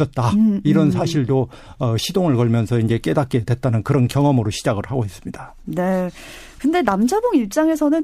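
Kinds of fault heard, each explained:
No kinds of fault are heard in this clip.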